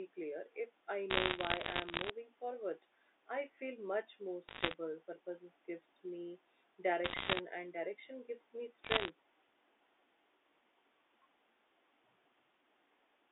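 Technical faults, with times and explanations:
1.10 to 2.10 s, 4.48 to 4.74 s, 7.04 to 7.40 s and 8.84 to 9.10 s, bit errors on a digital phone line: four bursts of sharp ticks and crackle over the speech, which itself stays intact underneath. On this G.711 mu-law line, with its band of about 250 Hz to 3.6 kHz, something like one bit in a hundred was flipped. Each flip corrupts one 8-bit sample, and a hit on the sign of a loud sample or a high-order bit throws that sample far off, producing a click.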